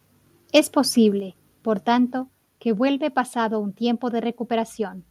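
Microphone overload appears from 0.56 to 0.59 s. The peaks there overshoot by about 3 dB and flatten against the converter's ceiling, with around 7 percent of samples squared off, most likely from an input volume set too high. The result is a brief, harsh crackle on the loudest part of the speech.

Microphone volume stepped down follows at 1.2 s, when voice and background fall together by about 4 dB in one abrupt step. It drops again at 2.22 s, by about 2 dB. The likely cause is call software reacting to the overload by cutting the microphone's input gain.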